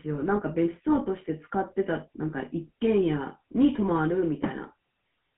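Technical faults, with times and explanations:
Throughout: GSM full-rate codec. The speech carries a constant buzzy, gravelly roughness on top of a telephone band of about 150 Hz to 3.4 kHz. The codec rebuilds the vocal tract from a coarse model and excites it with a sparse, regularly spaced pulse train, so voicing turns rasping rather than smooth. That roughness is what separates it from plain band-limiting, which only dulls the sound, and it fits a 13 kbps full-rate stream.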